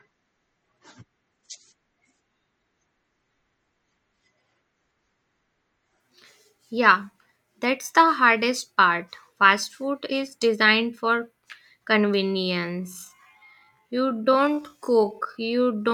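From 0 to 6.0 s the opening is dull and smeared. Sibilants sound thin and swirly, with watery artefacts around the speech. At 6.0 s the top end returns at once, with no gap or dropout. This is an adaptive stream starting at a low bitrate. The player began on a cheap version to start quickly and switched up after measuring the connection. The sound fits a 32 kbit/s MP3 stepping up to about 128 kbit/s.

From 12.17 s to the end at 15.94 s the pace suddenly drops to about 0.62 times normal speed. The pitch does not fall with it. The speech turns drawn-out. That comes from short pieces being repeated to fill the extra time. This is likely a time-stretched section, where software lengthened the audio to fit a set duration while holding the pitch.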